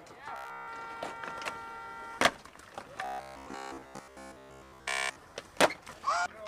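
The audio turns into robotic sound from repeated short buffers at 0.36–0.68 s and 3.05–5.16 s, a rigid, metallic 66.7 Hz buzz, likely from a roughly 15 ms slice looping while essentially all new audio is skipped. A spectrogram would show evenly spaced harmonic lines, and the waveform identical 15 ms cycles.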